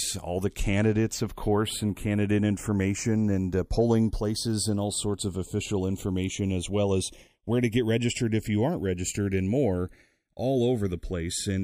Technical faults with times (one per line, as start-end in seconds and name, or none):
0.00-11.63 channels drifting apart